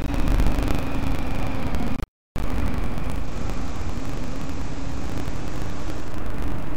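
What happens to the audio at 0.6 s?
At 0.6 s the sound carries buffer tearing, which runs through the whole clip rather than starting there. The writing side and the playback hardware have drifted so that their positions cross within each period. Roughly half of every buffer replays audio from about 70 ms earlier, with hard joins at both edges. Those repeating splices produce a steady, robotic rattle at 25 Hz, pointing to a 40 ms buffer period, heard wherever signal is present.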